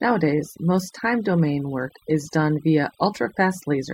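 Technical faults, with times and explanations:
Throughout: overdone noise removal. Aggressive noise reduction mutes frequency bands near its noise estimate, leaving near-silent gaps with twinkling specks.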